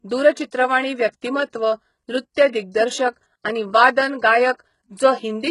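Throughout, the treble sounds rebuilt rather than recorded: s sounds turn gritty and metallic, and nothing reaches above 11.1 kHz. This is likely HE-AAC compression at heavy settings, fitting roughly 12 kbps, with replicated upper bands showing as smeared, copied-looking texture on a spectrogram.

At 1.21 s, a short hiss of about 11 ms precedes an attack, which sounds softened. This is pre-echo: quantisation noise spread across the block fills the quiet before the onset, visible as a low-level smear leading the waveform's transient.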